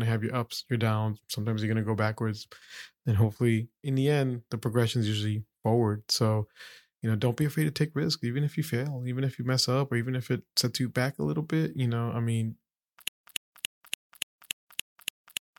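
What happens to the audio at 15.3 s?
A 0.13 s burst of speech repeats every 0.29 s with 155 ms of dead silence between, a stutter with silent gaps from 13.08 s to the end, likely a stalled stream.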